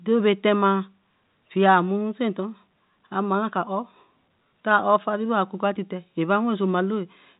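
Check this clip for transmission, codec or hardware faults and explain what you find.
No transmission, codec or hardware faults turn up in the speech; it carries the ordinary character of a G.711 A-law telephone channel, with nothing above about 3.8 kHz and only the faint level-following hiss of that format's coarse quantisation.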